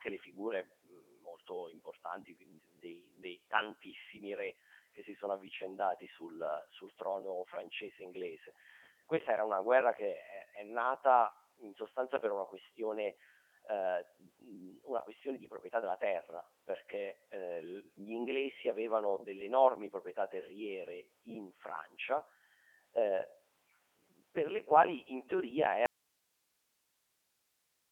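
Throughout, the speech passes through a Codec 2 vocoder, with heavy damage that fits its 3.2 kbit/s mode. Only pitch, voicing, energy and envelope survive, and sine synthesis rebuilds a robotic, buzzy voice. A spectrogram shows a 300 Hz to 3.4 kHz band, empty above 3.5 kHz.

At 25.86 s the speech drops out abruptly to a faint residue of hiss, roughly 45 dB below the signal, lasting to the end. The waveform collapses to a thin noise floor. The likely cause is a lost input with the downstream path still live.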